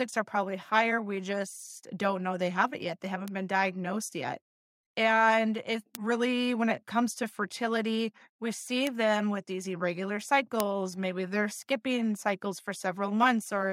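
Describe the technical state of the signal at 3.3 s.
At 3.28 s a single sharp tick cuts through the speech just before "been diagnosed yet", a bright, broadband click with no relation to the surrounding sound. It is a bit error spike: one sample has had a single bit flipped, somewhere in memory or on a digital link, so its value leaps by a power of two and snaps straight back on the next sample. Because the jump lasts only one sample, the energy spreads across the whole spectrum as a tick.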